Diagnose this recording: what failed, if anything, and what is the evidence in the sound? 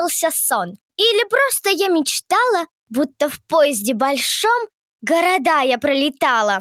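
Nothing stood out on listening that would point to a failure at any stage of the chain.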